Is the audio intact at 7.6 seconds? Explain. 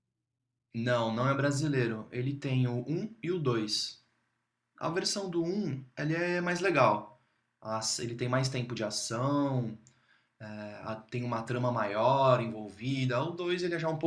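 Yes, the audio is intact at 7.6 seconds, with no dropout, click, distortion or other fault audible at that point.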